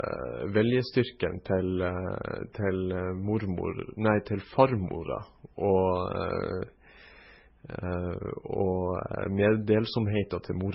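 Transcoding between lossy codecs is present throughout the speech. Nothing survives above 5.6 kHz, and two layers of swirly artefacts overlap, likely low-rate MP3 re-encoded as Vorbis.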